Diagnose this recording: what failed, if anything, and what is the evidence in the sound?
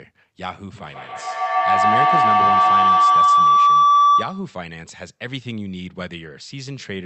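What failed is the acoustic loop around the call rather than the call processing itself: there's a feedback howl from 0.76 s to 4.65 s. A tone near 1 kHz swells to about 14 dB above the speech and pulses roughly every 150 ms. That pulse is the loop delay. Two devices in the same room kept re-capturing each other's output with gain above unity, so each pass got louder and narrower until the loop broke.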